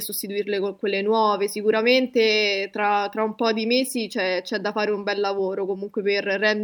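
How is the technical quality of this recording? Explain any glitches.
The technical quality of this recording is sound, with no glitches to explain.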